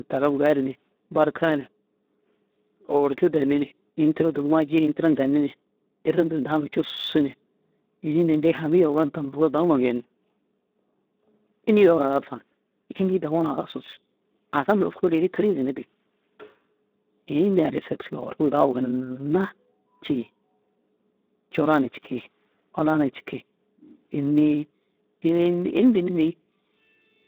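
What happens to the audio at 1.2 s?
At 1.2 s the speech carries the Speex codec damage heard across the whole clip. Too few bits for the excitation leave it hoarse and noisy, and the sound fits a rate near 11 kbps. A spectrogram shows a narrow 200 Hz to 3.7 kHz band and nothing above 3.8 kHz.

A block size mismatch (truncated) also runs throughout. Each block's tail is discarded before the next stage reads it, which produces a 100 Hz buzz while the pace stays essentially normal. The waveform shows small discontinuities every 10 ms, and the spectrogram shows harmonic lines at 100 Hz spacing.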